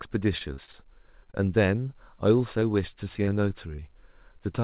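Speech that has crossed a narrowband call link, with nothing above 4 kHz, which points to a G.711 A-law path. From 0.38 to 2.00 s it suffers repeated packet loss (robotic sound): nine short holes, the longest 34 ms, each patched by extending the preceding sound. The concealment covers about a tenth of that stretch and gives it a choppy quality. On a spectrogram this appears as smeared, over-regular harmonic patches breaking up the formant detail. Short concealed packet loss strikes three more times, at 2.60 to 2.63 s, 3.25 to 3.29 s and 3.76 to 3.80 s. Each time about 20 ms went missing and was filled from the last pitch or as noise, heard as a brief smear or wobble. In the waveform each shows as a short patched segment. Between 2.72 and 3.30 s a jitter buffer slow-down repeats pitch periods to rebuild its reserve, adding 44 ms and running that passage at 94% speed without changing pitch. 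Sounds are slightly drawn out, and the spectrogram shows stretched, repeated glottal cycles.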